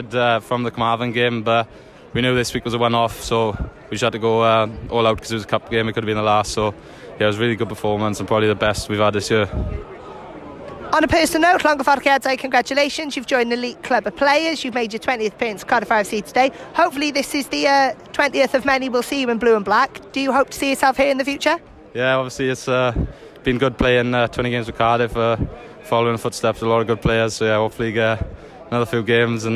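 Nothing is technically wrong with the audio in this clip.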